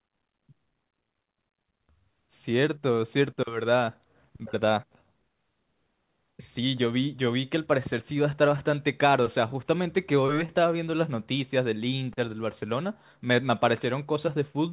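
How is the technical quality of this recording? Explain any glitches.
Nothing stood out on listening; the speech carries the narrow, telephone-like band of its G.711 mu-law call path, with nothing above 4 kHz.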